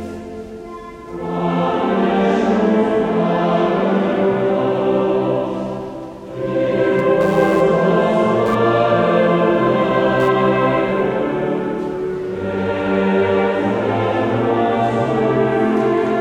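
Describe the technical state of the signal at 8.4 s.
Computer activity noise, 6.98 to 11.07 s: computer load disturbs the shared audio ground, adding a buzz pulsing near 100 times a second, seen as vertical spectrogram stripes.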